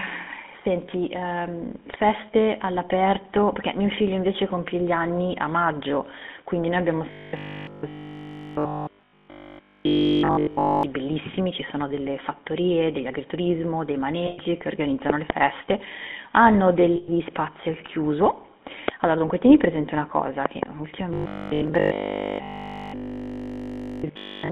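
GSM full-rate codec, throughout: the speech is squeezed through a 13 kbps vocal-tract model on a 200 Hz to 3.5 kHz line, leaving a plainly audible buzzy, gravelly roughness.

Robotic sound from repeated short buffers, 7.11 to 10.83 s: audio likely arrived too seldom, so nearly all of it is 20 ms snippets looped, imposing a rigid metallic 50 Hz buzz.

Lost GSM frames, 14.26 to 14.38 s: 120 ms of bad frames were replaced by the last good frame's settings, heard as a rough, metallic ring.

Loud pop, 15.10 to 15.32 s: two sharp pops about 20 dB above the speech, likely a voltage step from a switch, static or driver glitch, while the speech carries on underneath.

Lost GSM frames again at 16.96 to 17.09 s, another 120 ms of held, ringing sound.

Loud pop at 18.88 s: a single click about 20 dB above the speech.

Lost GSM frames at 19.28 to 19.31 s: a brief 20 ms gap filled with a metallic blip.

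Loud pop, 20.46 to 20.65 s: two pops about 15 dB above the speech.

Robotic sound from repeated short buffers, 21.14 to 24.52 s: the same 50 Hz metallic buzz from looped 20 ms snippets returns and lasts to the end.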